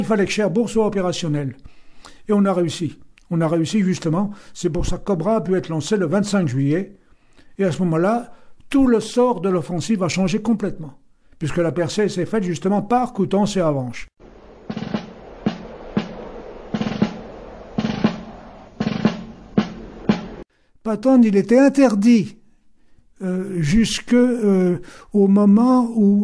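No technical faults are audible anywhere in this audio.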